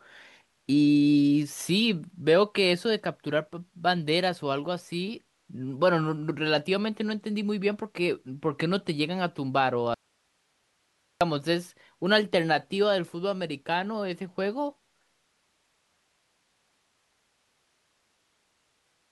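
The signal path likely lost its feed from 9.94 to 11.21 s, an audio dropout to a faint residue: the speech cuts abruptly, leaving only faint hiss for 1.27 s.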